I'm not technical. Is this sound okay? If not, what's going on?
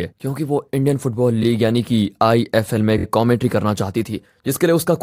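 No. There are two short stutters caused by repeated frames. The audio is stored in small blocks, each about 23 ms long. Here, a block was played again instead of moving on. At 1.42 s one block plays twice, giving a tiny hiccup. At 2.97 s one block repeats three extra times, up to 3.04 s, giving a longer stutter. Each repeat makes the speech slightly longer, by about 70 ms in the second spot.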